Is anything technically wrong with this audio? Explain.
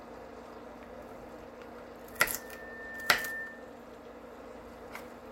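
Yes. From 2.12 to 3.81 s there is loudspeaker feedback squeal: the microphone re-amplifies its own loudspeaker, so a 1.8 kHz tone builds over about a second to roughly the level of the sound itself.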